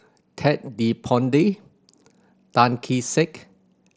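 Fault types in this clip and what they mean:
No faults found in this speech clip, which is carried over a Bluetooth mSBC headset link with its band limited to about 8 kHz.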